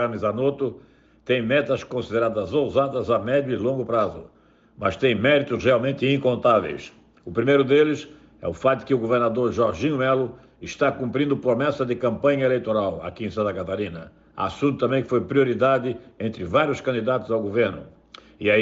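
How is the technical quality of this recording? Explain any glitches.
The technical quality of this recording is sound, with no glitches to explain.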